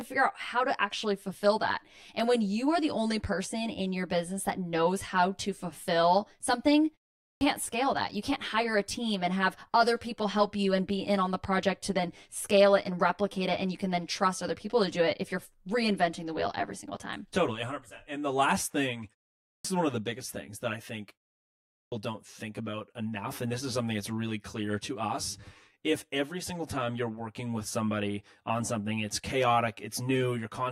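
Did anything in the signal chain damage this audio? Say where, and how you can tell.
Yes. Throughout the clip there is channel delay (comb filtering). One channel runs roughly 10 ms behind the other before the mono sum, which points to a driver or buffer offset. A spectrogram shows fixed horizontal notches starting near 50 Hz and repeating about every 100 Hz.

At the playback stage there is a clipped start after a pause, three times. At 7.23 s, after "how to fulfill something", about 0.18 s is lost before "scale that". At 19.45 s, after "the last thing", about 0.2 s is lost before "is one of the". At 21.72 s, after "things that I think", about 0.2 s is lost before "don't think about enough". Each follows a gap of 0.34 to 0.62 s, while the output device is waking. The waveform shows the sound beginning abruptly out of silence, with no onset.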